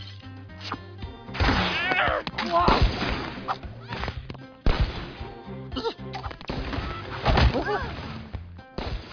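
The signal holds steady and intact throughout, with no dropouts, distortion or other technical faults anywhere in the audio.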